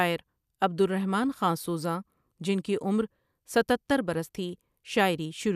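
Nothing in the speech here stands out as a technical problem, so there's nothing to point to at any moment along the way.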